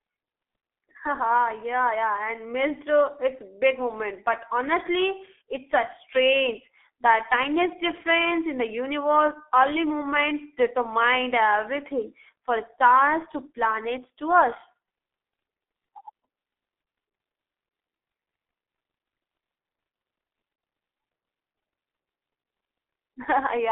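From start to end, the speech carries G.723.1 codec damage: a narrow band of roughly 300 Hz to 3.5 kHz, plus heavy hoarseness and smeared consonants. Plain band-limiting alone would stay clean, so this points to a very low-rate coder near 6.3 kbit/s.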